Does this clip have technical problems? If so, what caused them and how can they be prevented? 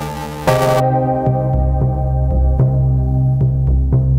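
Yes. Buffer tearing, from 0.0 to 0.8 s, gives a robotic 375 Hz buzz. The writer and the hardware reader have slipped. About half of each buffer repeats audio roughly 7 ms old, which fits a 128-sample buffer. Keeping the writer well ahead of the read position prevents it.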